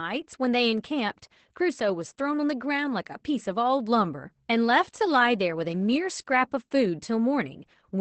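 Opus voice compression runs through the whole clip, with plainly audible damage. The speech is coded by SILK, the linear-prediction mode, in wideband form, and nothing survives above about 8.6 kHz, so sibilants and breath lose their top and the voice sounds muffled. The excitation is coded coarsely, adding a hoarse, slightly robotic grain, which fits a low rate of around 12 kbps with 20 ms frames.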